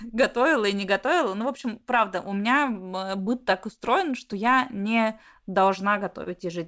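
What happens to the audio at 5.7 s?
Around 5.66 s the run of repeated timing corrections ends. Since 0.38 s the receiver has stretched the audio to 98% speed, adding about a tenth of a second. On the waveform and spectrogram this shows as slight repeated segments and small discontinuities at the splices. The cause is clock drift between sender and receiver: the sender's clock runs roughly 2% slow, so the jitter buffer keeps draining and must be padded at uneven intervals. Harmonic tracks show tiny jumps.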